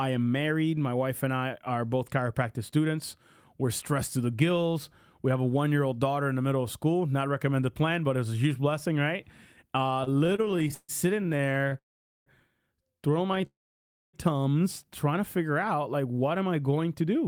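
From 10.01 to 11.76 s the speech stutters in repeated stalls. Dozens of short breaks chop the flow, the longest about 144 ms. Packets were arriving late, so the jitter buffer kept running dry. Each time, the last sound was stretched to fill the wait, about 0.54 s in all, close to a third of that span. Nothing is lost. The audio just drags and hiccups. A brief second burst of stutter follows at 13.32 to 13.44 s, with a few breaks, the longest about 11 ms.

At 11.78 s the audio stops dead for about 0.5 s, until 12.28 s. Almost all of that is silence. Then the speech resumes where it left off. This sounds like a call audio freeze. The likely cause is packets held up in transit, leaving the jitter buffer empty and the delay about 0.48 s longer. A second freeze runs from 13.46 to 14.15 s, about 0.67 s, again mostly silent.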